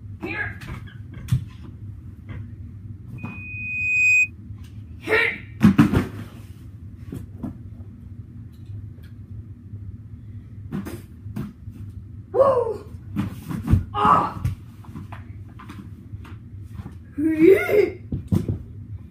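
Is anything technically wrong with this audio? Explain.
Yes. Loudspeaker feedback squeal, 3.18 to 4.31 s: a microphone re-amplifies its own loudspeaker. A 2.5 kHz tone swells over about a second, reaching about 10 dB above the sound.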